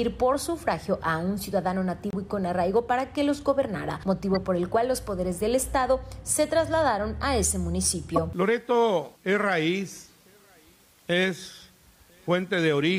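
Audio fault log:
0.40 s, 4.33–4.36 s and 8.16–8.18 s, corrupt frame decoded: three brief blips with energy at the wrong frequencies, peaking at about -30, -20 and -10 dBFS in turn. Bit errors in compressed frames went through the decoder, so misread gains and codes sound for a few frames each.
2.10–2.15 s, corrupt frame muted: an abrupt silent hole of 44 ms, which fits three consecutive frames that the decoder rejected after bit errors. The player filled them with silence, so the sound drops out and the timing around the gap stays intact.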